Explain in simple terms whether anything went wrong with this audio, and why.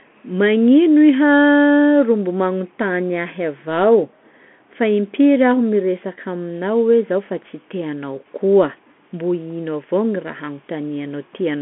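The speech ran through a Bluetooth CVSD headset codec for the whole clip. It passes only 200 Hz to 3.4 kHz, leaving it muffled, with scratchy s sounds and grainy hiss.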